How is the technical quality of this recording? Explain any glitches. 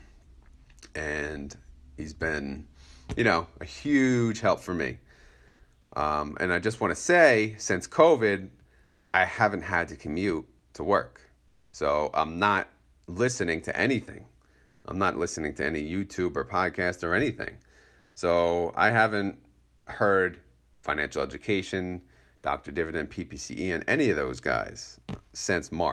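The speech has one recurring glitch: brief pauses where the background turns into a flat, featureless hiss, with the top end rolled off above about 12 kHz by the call codec.

Comfort noise in place of the background: at 5.47–5.59 s (after "huge help for me"), 5.81–5.91, 8.83–9.13, 11.47–11.73 (between "to commute to work" and "I'm not listening to"), 14.65–14.83, 17.99–18.15 (after "or podcast or anything"), 19.77–19.85 and 20.73–20.83 s, gaps of 80–300 ms go smooth and characterless. Most shift level by 3 dB or less, but the last drops about 9 dB. The likely cause is Opus discontinuous transmission: the sender pauses between phrases and the receiver fills in synthetic noise.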